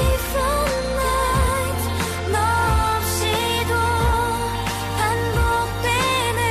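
Nothing stood out as a technical problem on listening to the audio.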